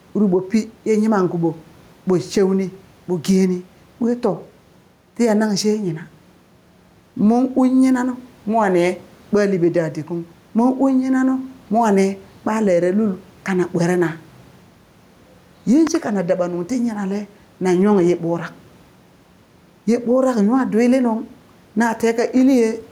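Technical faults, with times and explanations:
Throughout: gain pumping. The room noise sits about 36 dB below the speech, and the gain swings by around 5 dB under loud sounds, likely from input gain set too high with a fast limiter pulling it back. Unlike gating, the background never drops out.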